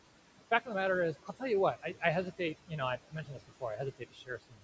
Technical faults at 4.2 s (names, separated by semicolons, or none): noise suppressor artifacts; speech cut by the noise suppressor